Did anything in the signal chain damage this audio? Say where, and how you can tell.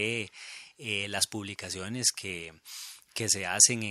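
No, nothing along the chain seems to have left a mark on this speech, so there's no stage to point to here.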